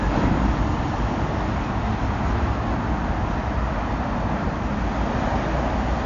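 An everyday sound recording with plainly audible AAC compression damage running the whole way through. Nothing gets above about 7.1 kHz, so it sounds dull, with a smeared, warbly texture. That's likely AAC-LC at a low bitrate, something around 32 kbps.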